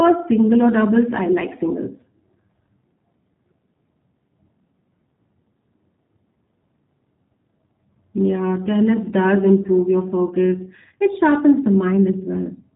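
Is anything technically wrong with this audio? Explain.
Yes. Throughout the speech, G.729 codec damage is plainly audible. The codec rebuilds each 10 ms frame from a vocal tract filter, a pitch predictor and a few pulses, which fits about 8 kbit/s, so the sound is rough and synthetic. A spectrogram shows nothing above 3.8 kHz.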